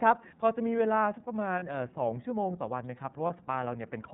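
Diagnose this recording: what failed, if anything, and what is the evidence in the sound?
iLBC codec, throughout the clip: the codec stage. The speech is band-limited with nothing above 4 kHz, and it has a plainly audible rough, slightly synthetic edge. Each frame's excitation is coded on its own, with no prediction from the frame before, so detail is coarsened frame by frame. The texture points to the 30 ms mode at about 13.33 kbps, the narrowband setting that trades fidelity for robustness.

Lost iLBC frames, at 1.59 to 1.63 s and 3.27 to 3.30 s: the network stage, with concealment in the decoder. Each gap lasts about 30 ms, which fits one dropped packet carrying a single 30 ms frame. In place of the missing audio, the decoder repeated the last pitch cycle blended with noise, so each gap sounds like a brief held, faintly buzzy vowel. Because iLBC frames stand alone, the speech recovers cleanly right after each gap.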